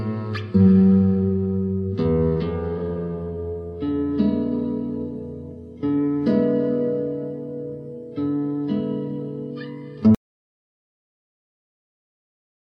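At 10.15 s the sound cuts off abruptly, and the last 2.5 s run to the end as silence with no room tone. This audio dropout to silence is likely an input lost while the recorder kept writing silence.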